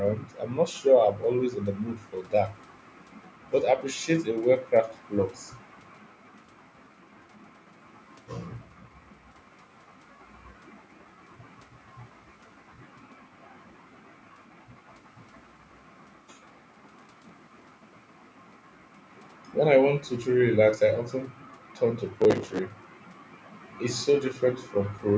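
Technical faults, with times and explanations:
16.49–17.73 s and 22.21–22.59 s, processor overload crackle: Gritty tearing rides on the speech in two bursts, the first about 1.2 s long and the second under 0.4 s. The processor fell behind and missed many buffer deadlines in a row. Each buffer was only a few milliseconds long, around 5 ms. Each miss replayed a scrap of old audio with hard edges. Those rapid, abrupt splices blur into crackle. It stops once the load eases.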